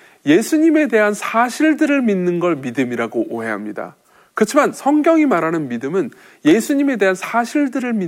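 A scratch or blemish on the disc wipes out more data than error correction can rebuild on each rotation, so the player interpolates or mutes the lost samples. In this speech clip that produces CD scratch ticks: four regular clicks between 6.01 and 6.51 s, the longest only about a millisecond long.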